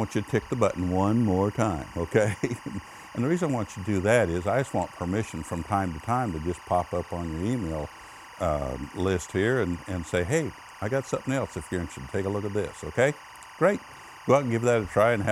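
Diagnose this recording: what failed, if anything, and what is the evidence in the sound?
Timecode bleed has crept in through the analogue wiring. A chirping warble sits behind the sound for the whole clip, well below the programme. It flips between tones near 1 and 2 kHz. The code runs at 24 frames per second, leaking from an adjacent cable or track.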